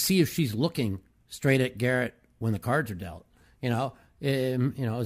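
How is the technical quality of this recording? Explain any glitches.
Nothing to flag here: the speech comes across without any glitches worth explaining.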